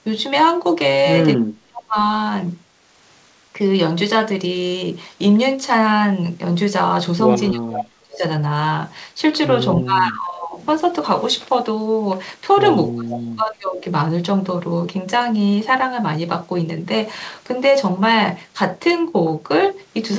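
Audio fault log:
1.37–1.96 s, 7.52–8.23 s, 9.78–10.6 s, 12.91–13.84 s: speech suppressed in double talk. The speech dips by up to about 40 dB, then returns. An echo canceller likely muted it while both sides talked.
7.77–7.84 s: echo leak. A brief delayed copy of the speech, 364 ms late and about 10 dB down, slips through, likely from a loudspeaker echo the canceller missed.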